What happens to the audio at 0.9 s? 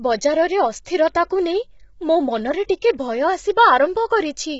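From 0.85 to 0.861 s, a pre-echo puts a short hiss of about 11 ms ahead of an attack. Quantisation noise spreads backward through the transform block, so the onset sounds smeared. Under this, heavy low-delay AAC compression, likely AAC-ELD at around 16 kbps, makes the speech rough and grainy. Nothing is heard above 7.7 kHz.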